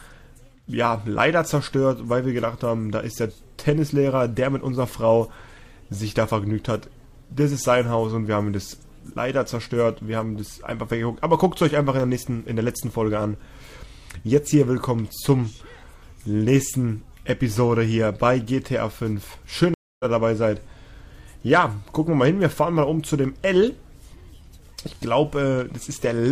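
At 19.74 s the connection to the stream dropped, so the player stopped receiving data, reconnected and started a new decoder partway through the stream. This is a stream reconnect. The audio cuts out for about 256 ms, until 20.05 s, and then resumes at a point roughly a fifth of a second further on than where it stopped. That short stretch of sound is skipped, so the return is an abrupt jump forward rather than a clean continuation.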